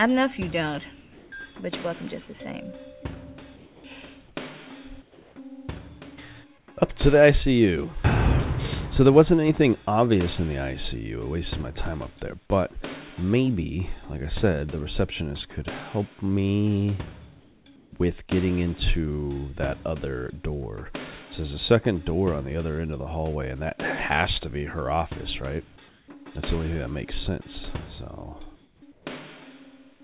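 Comfort noise in place of the background appears at 1.02, 3.56, 4.28, 5.02, 6.58, 17.4, 25.88 and 28.56 s, for 80 to 420 ms each. The real background drops out for smoother hiss, usually about 3 dB quieter but about 1 to 2 dB louder at 4.28 and 25.88 s. This is likely discontinuous transmission filling the pauses.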